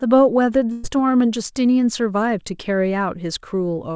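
At 0.72 s a burst of packet loss interrupts the speech until 0.86 s. About 120 ms of audio never arrived, and the receiver filled roughly 116 ms by extending the last received sound and lowering it as the gap continued. The result is a brief held, fading smear, after which speech resumes with that stretch simply gone. On a spectrogram the harmonics or noise bands run flat and dim across the gap instead of moving, while the waveform shows a repeating, decaying envelope and then an abrupt change where real audio returns. Throughout, nothing appears above 8 kHz, which fits a wideband call codec such as G.722.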